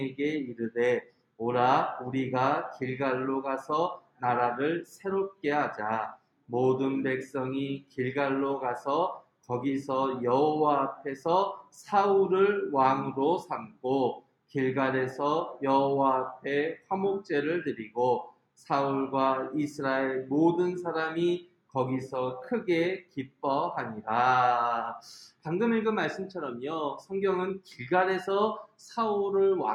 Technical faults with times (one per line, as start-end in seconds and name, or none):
1.02-1.40 sound cut by the noise suppressor
4.00-4.22 sound cut by the noise suppressor
6.17-6.50 sound cut by the noise suppressor
7.83-7.98 sound cut by the noise suppressor
21.46-21.74 sound cut by the noise suppressor
23.02-23.43 sound cut by the noise suppressor